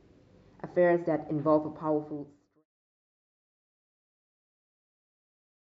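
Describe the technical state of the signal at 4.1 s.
At 4.1 s the signal is intact, with nothing wrong to be heard at that moment.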